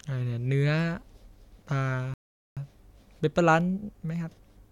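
At 2.14 s the speech halts in a rebuffering stall. The player ran dry and waited. Silence lasts about 0.43 s, then speech resumes exactly where it stopped.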